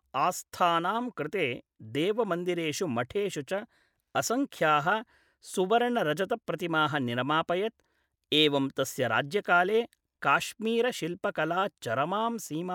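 No technical faults can be heard anywhere in the recording. The speech continues steadily, with no moment that stands out as a fault.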